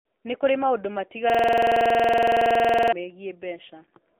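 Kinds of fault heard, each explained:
AMR narrowband mobile codec, throughout: the speech passes through a low-rate mobile speech coder that models the vocal tract with a few pulses per frame. The band runs about 250 Hz to 3.6 kHz, nothing above, and the buzzy, synthetic coding damage fits roughly 7.4 kbps.
System hang loop, 1.30 to 2.93 s: right after "kũrĩ maũndũ" the system froze while the audio hardware kept replaying its ring buffer. A 46 ms slice, consistent with a 2048-sample buffer, repeats about 35 times, giving a rattling stutter at 21.5 Hz.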